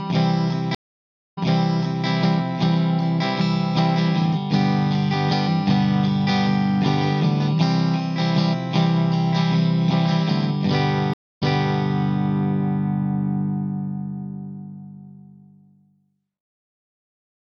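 Throughout the audio there is plainly audible MP3 compression damage, likely from encoding at a low bitrate around 64 kbps. It sounds watery and swirly, with smeared attacks. On a spectrogram this shows as a hard ceiling on the treble and speckled high-frequency patches that blink on and off between frames. There are two stream reconnects. The first runs from 0.75 to 2.07 s, with about 0.62 s of silence before playback resumes 0.7 s earlier. The second runs from 11.14 to 11.86 s, with 0.28 s of silence before it resumes 0.44 s earlier. Each time the player drops the connection and restarts its decoder, so a short stretch of audio repeats. On the waveform both appear as flat gaps followed by a soft fade-in and a repeated stretch of the preceding material.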